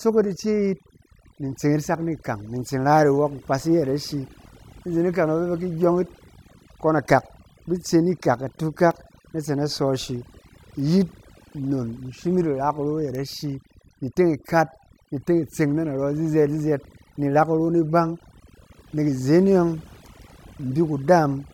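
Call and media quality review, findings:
Overdone noise removal, throughout the speech. Background pulled to near silence with twinkling specks. Probable component: noise suppressor set too strong. Bands near its noise estimate cut hard or dropped, taking quieter parts of the voice with them. No clean stretch to compare against. Suppression strength should be reduced.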